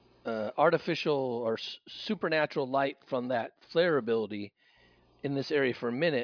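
Speech, with no technical faults.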